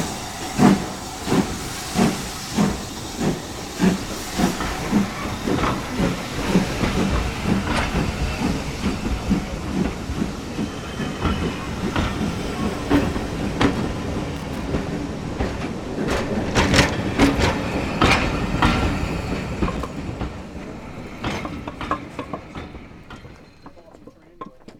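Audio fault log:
14.36–14.65 s and 19.76–19.89 s, loose connector crackle: a worn or dirty contact rapidly makes and breaks, chopping the signal into brief irregular bursts of crackle and scratching.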